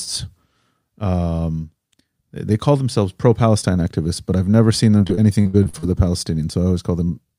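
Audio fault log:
4.97–5.85 s, repeated packet loss (robotic sound): eight dropouts in under a second, the longest 66 ms. Each hole is filled by stretching the last received sound, which covers about 251 ms, or 29% of the span. Roughly 260 ms of real signal is simply gone. The rapid alternation of real audio, repeated fill and missing pieces makes the speech choppy, with pieces missing throughout the stretch.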